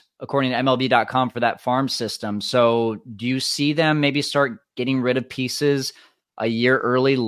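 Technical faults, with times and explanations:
No technical faults can be heard in this speech recording. There is nothing here that needs a time or an explanation.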